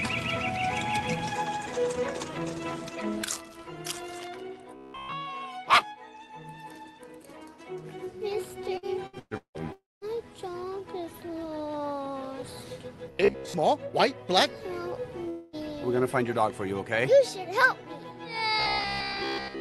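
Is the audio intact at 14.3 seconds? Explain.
Yes, the audio at 14.3 seconds is intact, with nothing beyond the ordinary sound of the call codec, which carries content up to about 12 kHz.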